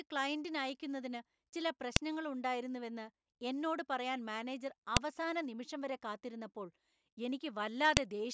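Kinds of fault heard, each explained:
File header played as audio: Each 3-second piece begins with its header bytes played as sound. These give sharp snaps at 1.96, 4.97 and 7.97 seconds.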